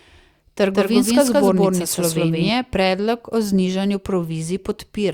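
From 0.73 s to 2.49 s the speech carries a doubled audio track: a second, equally loud copy trails about a fifth of a second behind, full-band and dry, switching in and out abruptly before "predlog o znižanju". Likely a second, slower capture path mixed in.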